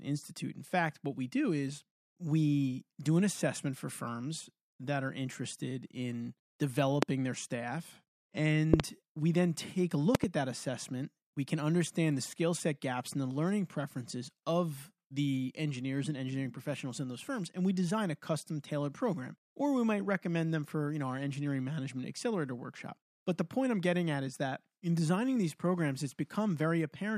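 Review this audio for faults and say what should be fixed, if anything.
Three bursts of loud popping land on top of the speech, which continues beneath them. A single pop sits at 7.03 to 7.05 s, just before "their staff". A double pop follows at 8.74 to 8.82 s, just before "we then take a", and another double at 10.15 to 10.26 s, between "we then take a" and "at that assessment". Each peaks about 25 dB above the speech. The likely cause is a sudden voltage step or pulse from a connector, switch, static discharge or driver glitch, which the following circuitry shapes into a short burst. On a waveform each pop is a tall, narrow spike standing far above the speech envelope, and on a spectrogram it is a thin vertical stripe across the full frequency range. Firm, clean connections, good grounding against static and no switching or replugging during recording would prevent these pops.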